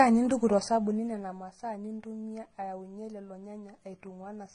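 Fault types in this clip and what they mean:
Transcoding between lossy codecs: the speech has two kinds of coding damage stacked together. There's the swirly, smeared texture of a very low-rate codec, fitting HE-AAC at around 16 kbit/s, plus the watery MP3 ringing you'd expect near 39 kbit/s. It was likely encoded once and then re-encoded into MP3. Nothing gets through above 10 kHz, and the second encoder spends its bits reproducing the first one's mess.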